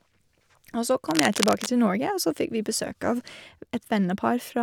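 Cable scratch noise runs from 1.08 to 1.70 s. A worn cable or connector was likely being moved, so its contact resistance jumped about rapidly, adding dense, uneven bursts of scratchy rustling over the speech, only a little below it in level.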